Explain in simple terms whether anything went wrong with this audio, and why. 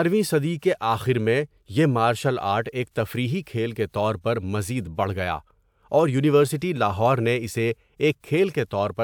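Nothing went wrong here: the speech comes through steady and unbroken, with no glitches, dropouts or odd noises anywhere along the way.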